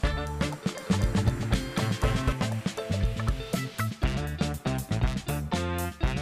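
From 0.80 s to 2.32 s the audio has a doubled audio track: a second full-band copy trails the original by around 200 ms at roughly equal level, with no decay or room colour, and it cuts in and out abruptly, likely from a second, slower capture path.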